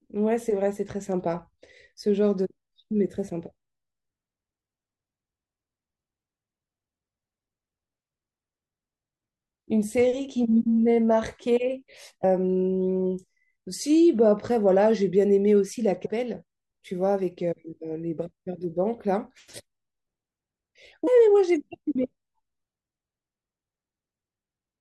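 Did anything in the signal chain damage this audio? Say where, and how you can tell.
Yes. Damaged data in a compressed stream, at the codec or storage stage: brief glitches at 12.21 to 12.24 s, 16.05 s and 21.06 s. Corrupted frames made the decoder misread them and hunt for sync. A spectrogram shows thin broadband vertical smears, and the waveform shows abrupt discontinuities.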